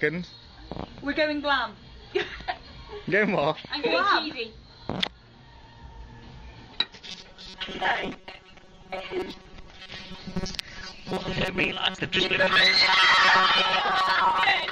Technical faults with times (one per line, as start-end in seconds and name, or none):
7.08-14.71 robotic sound from repeated short buffers